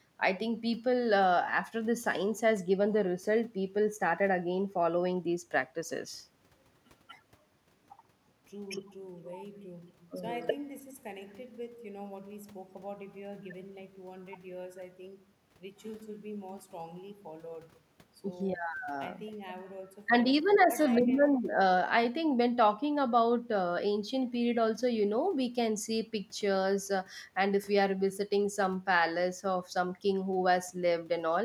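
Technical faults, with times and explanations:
Nothing technical goes wrong anywhere in this bit of speech, so there's nothing to list here.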